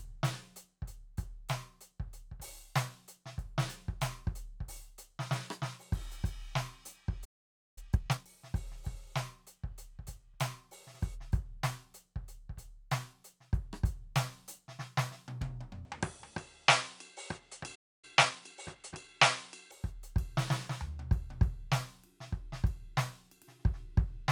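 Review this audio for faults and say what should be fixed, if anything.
Playback stall at 7.24 to 7.78 s and again at 17.75 to 18.05 s: the music drops to silence for about 0.52 s and then about 0.28 s before resuming. The likely cause is the player's buffer running dry or its audio thread being held up, so nothing reached the output until data arrived again. Prevent it by enlarging the playback buffer and keeping the audio thread free of blocking work.

Time-compressed catch-up at 7.78 to 8.28 s and 18.05 to 19.15 s: right after each stall the music rushes ahead at its normal pitch, at twice normal speed after the first gap and 1.25 times after the second. The player is trimming the backlog built up during the silence by dropping short slices and cross-fading across the joins. Prevent it by fixing the stalls, or by allowing a short skip rather than audible compression.

Input switched to a poorer device from 15.85 to 19.71 s: the sound turns dull, the level shifts by roughly 5 dB, and a new noise floor appears far below the music, with no gap at either change. 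This likely comes from the recording input being moved to a narrower-band microphone or headset profile and later moved back. Prevent it by locking the input device for the whole recording.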